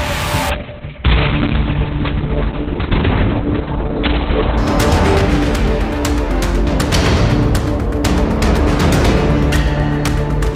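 From 0.51 s to 4.63 s a call bitrate drop makes the sound turn coarse and watery, with everything above 4 kHz gone. That fits the encoder falling from about 48 to 6 kbps. Unlike a plain low-pass filter, the coding roughness arrives alongside the dulling.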